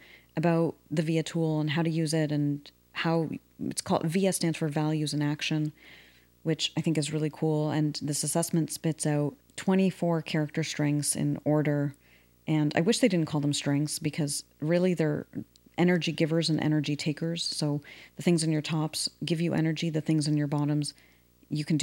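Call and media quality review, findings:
Video or display buzz, throughout: 59.94 Hz field-rate buzz with hash plus a 15.7 kHz line-rate tone, well below the speech. Screen or video cable coupling into the audio path.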